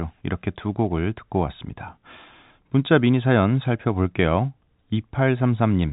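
Nothing stood out on listening to this telephone-band speech, which carries nothing above about 3.8 kHz, as expected for G.711 telephone coding.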